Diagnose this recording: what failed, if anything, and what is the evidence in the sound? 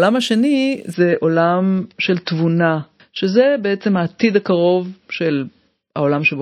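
The failure sits in the network and codec stage: an adaptive stream at a lower bitrate. At 0.93 s the speech switches abruptly, with no gap, to a duller rendition that lasts to the end. Above 5.8 kHz there is nothing, and coding artefacts are higher. The sound points to the player falling back from a 128 kbit/s MP3 rendition to one near 28 kbit/s as the connection slowed, and the encoder discarding treble to fit the smaller bit budget.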